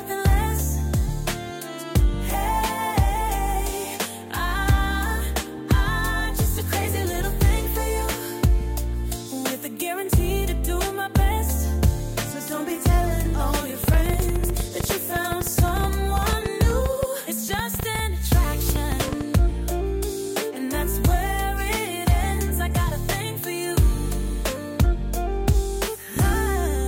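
A train of clicks runs from 13.84 to 19.22 s: around fifty sharp, similar pops at an uneven pace near 8.4 per second, peaking roughly 10 dB above the sound, likely from interference by nearby equipment or a faulty connection injecting pulses.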